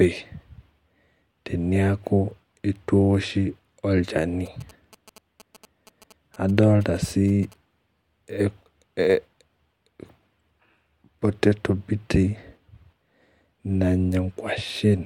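GSM signalling bursts, 4.46 to 7.54 s: a nearby 2G phone's radio bursts, rectified in the audio circuit, make a galloping dit-dit-dit of short 217 Hz buzzes.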